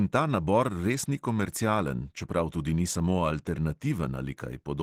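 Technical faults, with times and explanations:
Throughout, Opus compression: the speech sounds hoarse, grainy and muffled, with a rough, noise-filled texture where finer detail should be, yet the top end is not cut away. This is likely a low-rate Opus encode in its hybrid mode, where the lower band is coded by the speech model and the upper band is filled from band energies with folded or noise content. The plainly audible damage fits a rate around 16 kbps.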